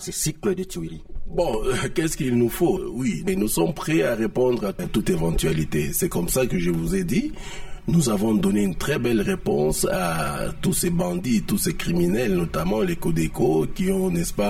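The audio has channel delay (comb filtering) throughout: one channel lags by roughly 5 ms, so mono summing cuts evenly spaced notches from around 100 Hz, giving a hollow, phasey tone.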